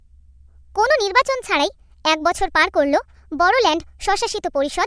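A wrong sample rate affects the whole of this speech clip: the samples are played back faster than they were captured, with no conversion, which fits 16 kHz material played at 22 kHz. Speech runs 1.38 times too fast and sits 5.55 semitones high, sounding hurried and squeaky.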